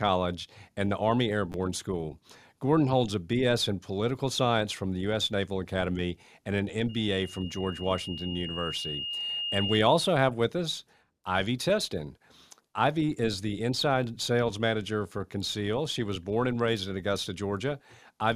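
At 1.52 to 1.54 s, a repeated buffer occurs. Fresh audio arrived late, so a 10 ms piece played twice more. It sounds like a brief buzz.

From 6.89 to 9.90 s, after "and an", a loudspeaker feedback squeal rises. The microphone is hearing its own loudspeaker. A 2.8 kHz tone swells over about three seconds to roughly speech level, cutting off before "have with us".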